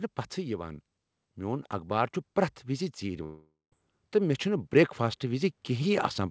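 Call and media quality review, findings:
Automatic gain rising, 1.36 s through to the end: voice and background swell together, slowly, not per word. AGC judged the input too quiet and kept ramping gain up. Check AGC target and ramp rate on the capture side.

Long network dropout, 3.24–3.73 s: sound stops, last bit smeared into a fading buzz, about 0.14 s of dead quiet, then audio resumes with roughly half a second gone. Likely packet loss with concealment filling the gap. The G.722 path itself shows only the expected cutoff at 8 kHz.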